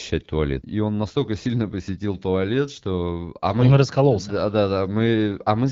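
Nothing here is technically wrong: it's a speech recording that has come through the AMR wideband (HD Voice) codec at 12.65 kbit/s, where the only audible trace is the codec's light touch, with the band up to 6.4 kHz modelled and the range above it filled in.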